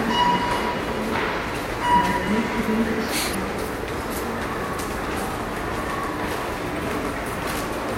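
At 3.31 to 3.35 s, damaged data in a compressed stream produces a brief chirp, squawk, click or short hole in the sound: corrupted bytes made the decoder misread frames and resynchronise. A spectrogram shows a short vertical discontinuity; the waveform shows an abrupt discontinuity.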